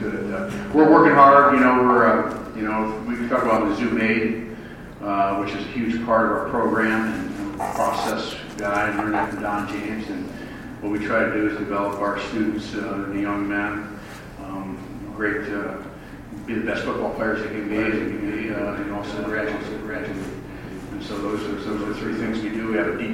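From 17.71 s to 22.37 s the audio carries a doubled audio track: a second, full-band copy of the same material sits about half a second behind the original and roughly 5 dB quieter, with no decay or room colour. It appears and disappears abruptly at those edges. A spectrogram shows every onset and harmonic pattern repeated as a fainter, shifted duplicate, and the waveform shows stacked transients. The likely cause is a second, slower capture path or an edit leaving two misaligned copies.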